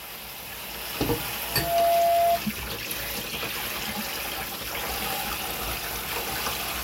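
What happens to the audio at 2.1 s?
Loudspeaker feedback squeal from 1.42 to 2.42 s: the microphone re-amplifies its own loudspeaker at 684 Hz, swelling over roughly 0.4 s into a tone well above the sound.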